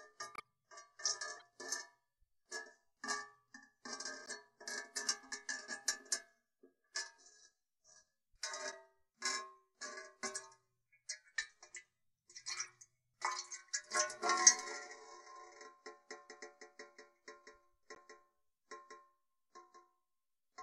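Short decoded-corrupt-frame bursts come at 0.34–0.41 s, 1.37–1.42 s, 4.25–4.31 s, 8.71–8.73 s and 12.64–12.70 s. Flipped bits in compressed frames were decoded anyway, throwing energy to wrong frequencies as quiet chirps and blips around −40 dBFS, with the first reaching about −35 dBFS. They last only a few frames.

From 16.29 s to the end, a doubled audio track appears. A full-band copy trails roughly 200 ms behind at about 5 dB down, likely from a second, slower capture path. It starts abruptly with no decay or room colouring, unlike an echo or reverb tail. Within it, one more corrupt frame blips at 17.95–17.98 s, fainter at around −45 dBFS.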